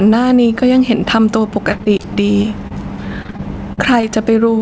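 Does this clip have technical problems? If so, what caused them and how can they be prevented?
Yes. Gain pumping runs through the whole clip: the level drops by around 10 dB under each loud passage. The likely cause is gain set far too high, with a fast limiter clamping it. On a waveform the noise floor rises and falls, and peaks look flattened. Lower the input gain so the limiter rarely engages.

Repeated packet loss (robotic sound) occurs from 1.72 to 2.73 s and from 3.23 to 4.05 s. Lost packets are patched by stretching the preceding sound, producing choppy speech with brief holes up to 44 ms. A spectrogram shows smeared, repeating harmonic bands and thin vertical gaps. A wired or more stable connection prevents this.

The spectrogram's empty band above 8 kHz fits a wideband codec such as G.722 on the call path.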